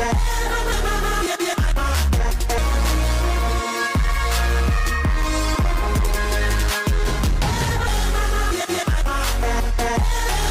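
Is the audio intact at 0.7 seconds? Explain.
No. At 0.72 s there is damaged data in a compressed stream: the decoder misreads the corrupted frame, loses sync and hunts for the next frame header. The result is a chirp, squawk, click or short hole. Unlike a plain playback dropout, the disturbance comes from garbled codec frames.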